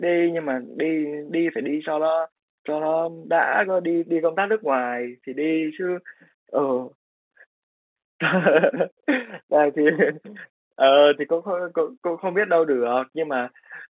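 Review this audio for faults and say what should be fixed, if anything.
Nothing stood out on listening to this speech, which carries the narrow band of ordinary mu-law telephone coding, so there is nothing here that needs fixing.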